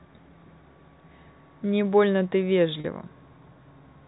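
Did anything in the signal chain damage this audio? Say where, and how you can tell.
Yes. The damage happened at the network stage: packets were dropped between 2.80 and 2.84 s, a 40 ms gap that fits two 20 ms packets. The receiver concealed the hole with packet loss with pitch repetition, replaying the last pitch period of the speech to span the missing stretch. Because the loss is short, it comes across as a brief held, slightly buzzy tone rather than a dropout, underneath the 4 kHz-limited G.711 telephone band.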